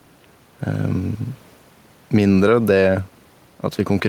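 Throughout the speech, the input gain is likely set far too high, with a fast limiter or compressor clamping the level down on each loud syllable. The result is gain pumping. The gain swings by roughly 5 dB whenever the speech gets loud. Loud and quiet passages sit close together, and the delivery sounds squashed. The room noise sits about 37 dB below the speech.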